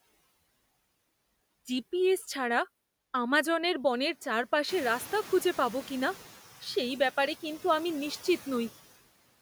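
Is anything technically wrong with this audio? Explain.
Yes, there are two faults in this speech clip, both from the noise suppressor.

Noise suppressor artifacts run through the whole clip. The suppressor estimates which frequency bands hold steady background noise and turns those bands down frame by frame, here by about 15 dB. Because the cut follows the speech, the noise floor sinks in the gaps and comes back up under the talking.

The noise suppressor is catching up from 4.68 to 6.22 s. Around 4.5 s the room noise jumps by about 15 dB, ending up roughly 18 dB below the speech. That room noise is part of the recording, not a fault. The suppressor's noise estimate lags behind the jump. For the first stretch it cuts only about 5 dB, so the louder noise comes through with less reduction. Over about 1.5 s the estimate adapts and the noise gradually sinks back down.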